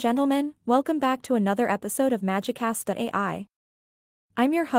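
A short speech recording with no technical faults to report: the signal is continuous and intact throughout, with nothing in the audio chain disturbing it.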